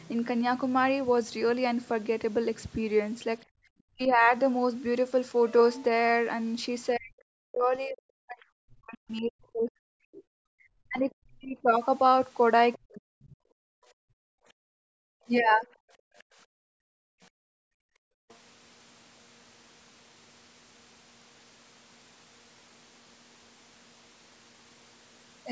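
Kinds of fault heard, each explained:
Background gated by the echo canceller: the canceller clamps the microphone while the far end plays, so room sound drops about 35 to 40 dB, briefly near 3.5 s and for roughly four seconds from 13.53 s.
Speech suppressed in double talk: the near talker dips by up to roughly 40 dB or breaks up while both sides speak, likely the canceller attenuating everything, around 3.9 s and across 6.93 to 13.25 s.
Other side's voice leaking through: faint far-end speech, roughly 25 to 35 dB below the talker, comes through in scraps near 12.7 s, 15.4 to 16.2 s and 18.3 s, likely uncancelled loudspeaker echo.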